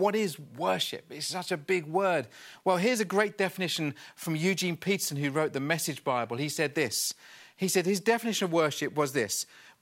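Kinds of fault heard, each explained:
Chunks out of order: around 4.22 to 4.26 s, a 20 ms block of the speech plays one chunk late, after the block that should follow it. Nothing is missing, but the swapped order leaves three hard joins, heard as a brief jumbled blip.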